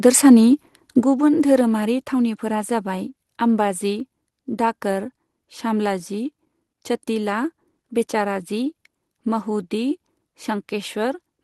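At 1.02 s the microphone volume stepped down, likely because the call software judged the input too hot and lowered the device gain in one move. Speech and background fall together by about 7 dB, abruptly, with no fade between levels.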